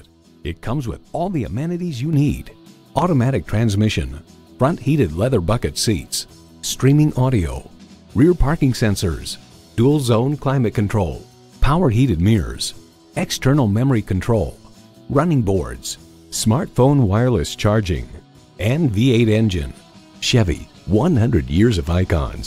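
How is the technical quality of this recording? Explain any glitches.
The recording has one clear fault. At 2.13 s there is a sudden gain jump of about 6 dB, held to the end. The level steps up between two samples, with no ramp. Sound and background noise get louder together. The likely cause is a gain change applied instantly.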